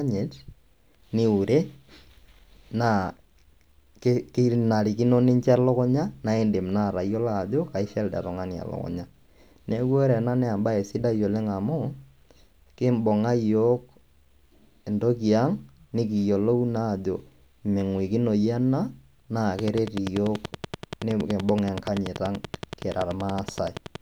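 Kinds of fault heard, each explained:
Train of clicks: same-shaped ticks at an even 10.5 per second from 19.6 to 24.0 s, likely interference; the regular spacing distinguishes it from random crackle.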